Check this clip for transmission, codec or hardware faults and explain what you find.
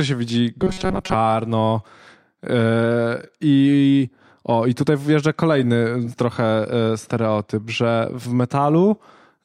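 There is one fault. From 0.60 s to 1.14 s, just after "się widzi", the speech shows robotic sound from repeated short buffers. New audio is likely arriving too late. The playback repeats a very short slice instead, and most of the real audio in that stretch is skipped. The repeats impose a fixed 188 Hz buzz, which fits a loop of about 5.3 ms. The voice turns rigid and metallic but still roughly follows the speech.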